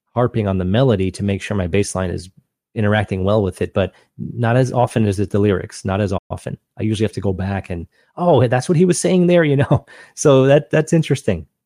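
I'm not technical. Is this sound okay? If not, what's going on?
No. Playback stall at 6.17 to 6.31 s: the speech briefly goes silent, likely because the player ran short of data, then carries on.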